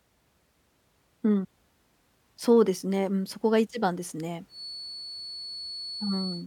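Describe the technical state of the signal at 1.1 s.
At 1.1 s the speech signal is intact, with no dropout, clipping, distortion or other fault to be heard at that moment.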